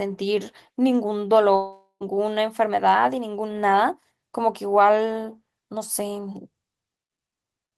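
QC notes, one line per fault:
1.55–2.03 s, long network dropout: The speech smears into a fading buzz, then about 0.11 s of silence. It resumes with roughly 0.46 s missing. Likely lost packets, with the receiver stretching the last sound until nothing remained.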